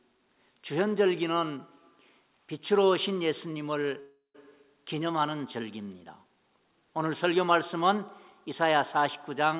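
At 4.0 s a call audio freeze begins, likely from delayed packets emptying the jitter buffer. The last sound continues as a fading buzz, then about 140 ms of silence, until 4.36 s. Playback resumes where it stopped, with nothing lost but 344 ms later, and stays band-limited to 4 kHz.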